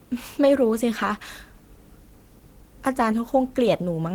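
Speech, with no audible faults.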